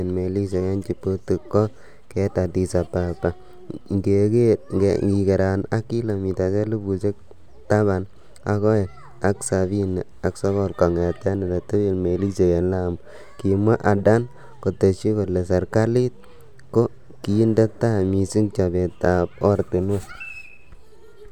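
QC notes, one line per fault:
No faults found anywhere in the speech.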